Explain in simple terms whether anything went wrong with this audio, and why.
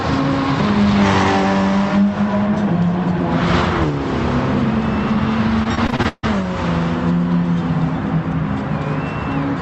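Between 5.63 and 6.25 s the sound turns choppy and robotic, with bits dropping out. This is repeated packet loss: seven pieces went missing in quick succession, the longest about 0.15 s, and each hole was patched by stretching the previous sound, covering roughly 40% of that stretch.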